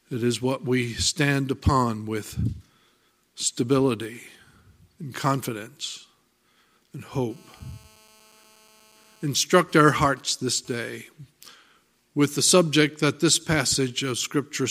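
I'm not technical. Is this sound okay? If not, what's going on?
No. A mobile phone using the older 2G network was close to the recording equipment during a call, and its radio pulses, sent about 217 times a second, leaked into the audio wiring and were turned into sound. This is GSM phone buzz. From 7.30 to 9.26 seconds you hear a hard, raspy buzz, steady and fairly quiet, that has nothing to do with the sound being recorded. It sits underneath it like an electrical rattle.

Right after that, the phone's user apparently stopped talking, so the phone switched to sending only brief groups of radio pulses instead of a continuous stream. These are GSM signalling bursts. From 9.27 to 10.95 seconds the steady buzz gives way to even ticks with a longer buzz twice a second, at a similar quiet level. Moving the phone away, or switching it off, would prevent both problems.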